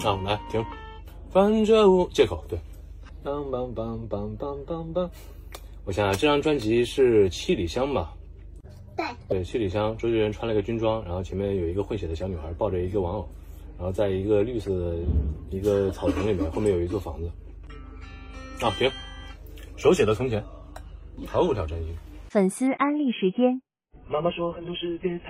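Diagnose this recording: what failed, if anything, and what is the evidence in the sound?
From 22.67 s, sound turns dull, nothing above 3.8 kHz, no gap: adaptive stream at a lower bitrate, the network forcing a starved codec version.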